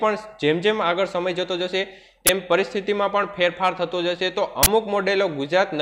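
At 2.27–2.29 s and again at 4.63–4.67 s, an uninitialised buffer plays out: a block was sent to the output before audio was written into it, so leftover memory contents were read as samples. The first, a 20 ms block, is a loud crack; the second, a longer 40 ms block, is a loud burst of digital noise.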